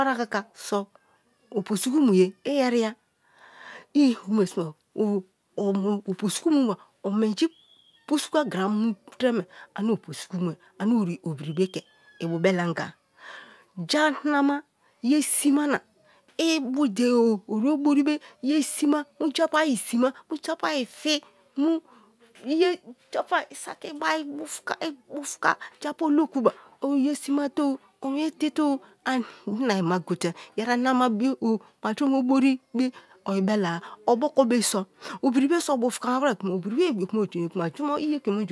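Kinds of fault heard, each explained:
No faults to report anywhere in the speech.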